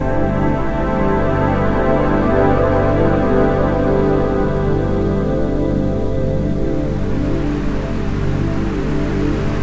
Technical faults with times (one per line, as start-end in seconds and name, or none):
none